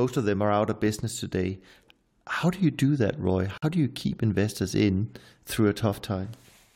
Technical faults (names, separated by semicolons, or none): gap at a join of encoded pieces